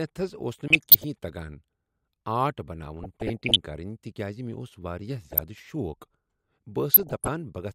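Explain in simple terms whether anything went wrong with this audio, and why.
Four short bursts of burbling noise sit over the speech, from 0.68 to 1.04 s, 2.97 to 3.56 s, 5.24 to 5.72 s and 6.94 to 7.28 s. This is DAB burbling. The digital radio signal was weak, so a small fraction of the data arrived wrong and got past the error correction. Separate slices of the sound then got short blips of noise, which creates the burbling.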